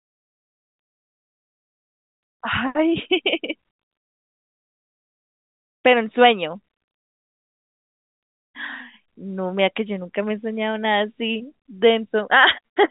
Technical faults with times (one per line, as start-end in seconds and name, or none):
none